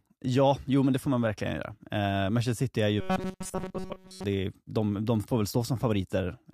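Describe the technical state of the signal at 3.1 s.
At 3.1 s the speech has collapsed into a rigid, metallic buzz pitched at 188 Hz. It only loosely tracks the words and persists from 3.01 s, just after "är ju", until 4.24 s, before "det är de de". This is robotic sound from repeated short buffers. The likely cause is audio arriving too seldom, with essentially the whole span filled by looping a fragment of about 5.3 ms, which imposes that fixed pitch.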